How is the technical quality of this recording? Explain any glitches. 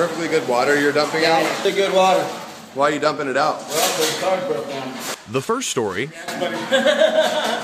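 One fault is audible: a brief glitch at 1.65 s caused by damaged data in a compressed stream. Corrupted bytes make the decoder misread the affected frame and lose sync until it finds the next valid frame header, which produces a short, sharp blip at that moment.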